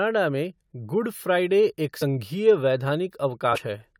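Compressed frames skipped at 1.99–2.02 s, just after "में गुड फ़्राइडे एक", and at 3.52–3.58 s: missing or rejected frames drop about 50 ms and then about 100 ms of speech, so the sound lurches forward.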